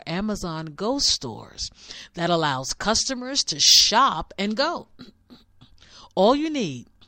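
From about 3.65 to 3.98 s, just before "and go", the speech hits hard clipping: it's pushed roughly 6 dB past what the stage can pass, so the peaks get sheared flat, throwing off high harmonics that come across as crackle on the peaks.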